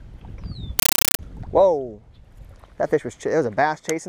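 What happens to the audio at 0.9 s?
From 0.79 to 1.19 s a Dolby Digital bitstream, which the 31 Hz frame rhythm fits, is passed on as ordinary samples instead of being decoded. This is a compressed stream played as audio. Each frame becomes an 8 ms noise burst followed by silence, heard as very loud, chattering static.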